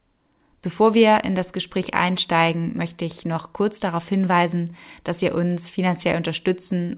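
No technical faults can be heard in the speech, which carries the ordinary character of a phone-band call path with nothing above 4 kHz, consistent with a 64 kbps G.711 mu-law stream.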